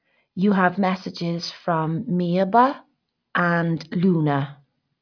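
No technical faults can be heard anywhere in this speech recording. There is nothing to place on a timeline or trace back to a cause.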